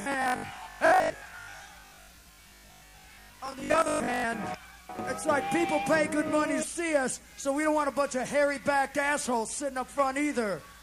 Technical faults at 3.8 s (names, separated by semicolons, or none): robotic sound from repeated short buffers